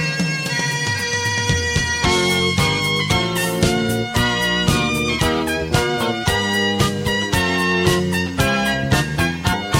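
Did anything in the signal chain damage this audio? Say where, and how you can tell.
Yes: damaged data in a compressed stream, at the codec stage, from 9.52 to 9.54 s. A brief glitch appears where corrupted bytes made the decoder misread frames and hunt for the next header. A buffer dropout would leave a plain gap, not a decoder losing sync and searching for the next frame.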